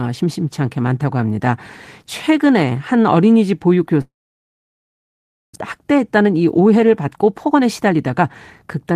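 From 4.01 to 5.57 s the speech dies into a fading tail, then about 1.4 s of silence: likely a long network dropout, losing roughly a second. Then jitter buffer speed-up, 5.77 to 8.25 s at 112% and 8.67 to 8.95 s at 119%, snips out pitch periods to catch up, so it sounds rushed but keeps its pitch.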